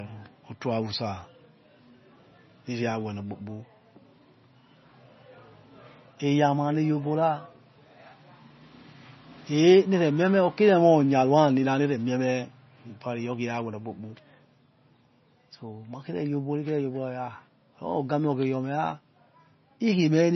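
MP3 compression damage runs through the whole of this speech recording, and it is heavy. Nothing is left above 6 kHz, so sibilants lose their edge and the sound is dull and boxed-in. The remaining detail has a watery, swirling quality as weak frequency components drop in and out from frame to frame. This is likely the result of an encoder starved of bits, which fits a bitrate of around 24 kbps, cutting the treble and discarding low-level content to stay within budget.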